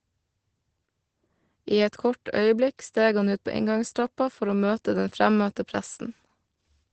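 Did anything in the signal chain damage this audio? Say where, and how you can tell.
Yes. The damage is in the codec stage and runs through the whole clip. This is Opus voice compression in its SILK mode. The speech is muffled, hoarse and faintly robotic, which points to a low bitrate of around 12 kbps. SILK codes the band only up to wideband and quantises the excitation coarsely. On a spectrogram, energy stops at a flat ceiling near 8.7 kHz from start to finish, and the harmonics below it look blurred and grainy.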